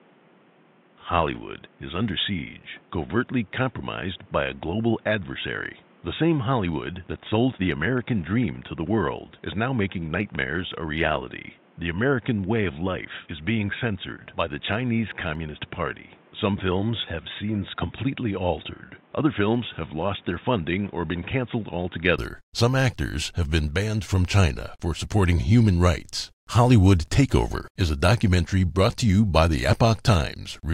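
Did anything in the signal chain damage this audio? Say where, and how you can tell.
Yes, at the input stage. From the start to 22.18 s, nothing reaches above 3.8 kHz. The speech sounds dull and boxy, about 5 dB quieter, with noise about 30 dB below it. At 22.18 s it clears, without a gap. That is likely an input switched to a poorer device.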